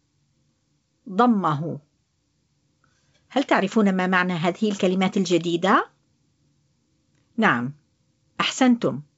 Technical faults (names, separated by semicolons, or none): none